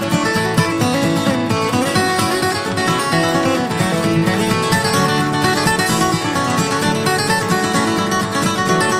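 Nothing in the audio stood out as a technical problem on listening.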